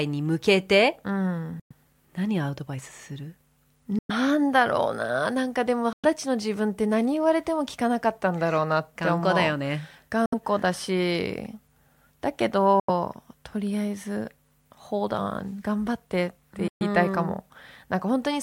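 The speech cuts to silence six times: 1.60 to 1.73 s, 3.99 to 4.11 s, 5.93 to 6.05 s, 10.26 to 10.34 s, 12.80 to 12.90 s and 16.68 to 16.83 s, each gap lasting 64 to 128 ms. These are most likely Bluetooth dropouts, where late packets were discarded. Unlike a buffer stall, which resumes where it stopped, the speech picks up further along, so the missing stretch is skipped rather than delayed.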